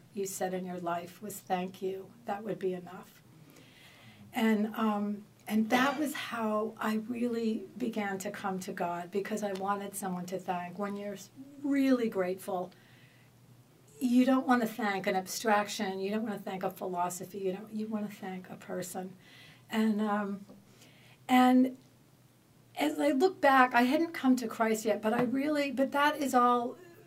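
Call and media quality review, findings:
No audible faults found in this clip. Nothing to flag for follow-up.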